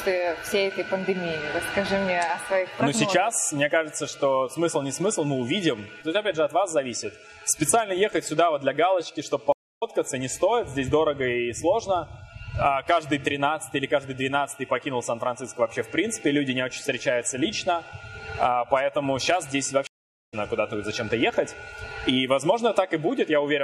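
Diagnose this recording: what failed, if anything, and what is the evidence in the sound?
Throughout the clip the upper detail has a watery, swirling quality, with metallic chirps on bright transients and softened attacks. This is codec damage, likely from MP3 compression at a low rate, and the plainly audible artefacts fit a 64 kbps encode. Weak frequency lines switch on and off from frame to frame. Unlike a simple low-pass filter or band-limited transmission, the swirl and chirping shift with the material.

At the network and playback stage there are two stream reconnects. The first runs from 9.52 to 9.83 s, with about 0.29 s of silence, and the second from 19.87 to 20.34 s, with about 0.45 s of silence. Each time the player lost the connection, reconnected and started a fresh decoder mid-stream. The audio comes back at a later point, skipping roughly 0.15 s the first time and about half a second the second time. 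A plain dropout or buffer underrun would pick up exactly where the sound stopped, but here part of the material is missing.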